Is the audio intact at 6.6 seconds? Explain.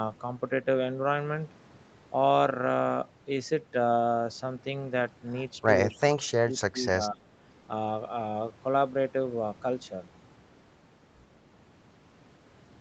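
No. From 5.89 to 7.2 s the talker is pulled down in uneven pieces, about a second in total, with the deepest dips reaching roughly 25 dB. This is speech suppressed in double talk, most likely because both ends spoke at once and the echo canceller, unable to separate the local talker from the loudspeaker echo, lowered everything.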